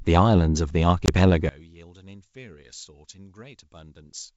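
Packet loss on an ADPCM call strikes at 1.06 to 1.10 s. A couple of packets' worth, 20 ms of speech, drops out and is filled with silence, leaving a hole with hard edges. The receiving decoder's adaptive predictor and step size no longer match the sender's, so when speech resumes it comes back slightly distorted before the decoder re-locks and it settles.

From 1.49 s to the end, the speech suddenly falls by about 23 dB, as if only a faint residue remains. The likely cause is one channel inverted. With one side of the stereo pair flipped in polarity, the material common to both channels cancels when they are summed to mono, and only their small difference survives. Throughout, the wideband G.722 coding at 64 kbit/s keeps its clear upper range.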